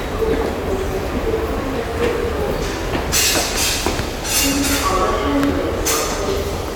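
No technical faults are audible.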